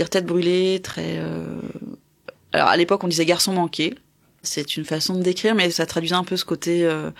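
At 0.93 s the speech drops out abruptly for about 9 ms. This is a gap between stream segments. The time stamps of two neighbouring segments do not quite meet, so the player fills the missing span with silence. No audio is lost. The sound just pauses and then resumes where it left off. The hole has hard edges, so it registers as a brief tick or stutter rather than a fade.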